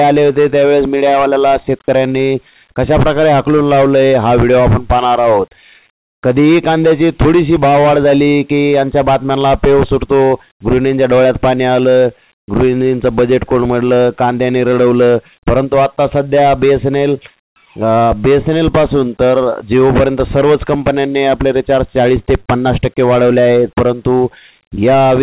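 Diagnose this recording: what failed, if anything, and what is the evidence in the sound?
Call processing: from 12.4 to 12.48 s the background drops about 28 dB into flat, featureless hiss, likely comfort noise in place of the background during transmission pauses.

Same stage: at 12.46 to 12.48 s the next sound starts abruptly, missing about 20 ms of its beginning, likely an onset clipped by the voice detector reacting late. Above 4 kHz there's nothing, as on a narrowband call link.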